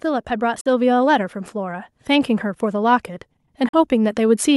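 From 0.05 to 3.08 s, automatic gain rising lifts the level by about 6 dB. The gain control judged the input too quiet and raised it slowly. Voice and background swell together over those three seconds.

At 0.61 to 0.66 s and again at 3.68 to 3.74 s, the sound cuts to silence with abrupt edges or a fade of a few milliseconds. Each gap lasts about 44 ms, which fits three lost packets. It then resumes further along, as if it had kept playing. The likely cause is a Bluetooth dropout, with packets missing the headphones' deadline.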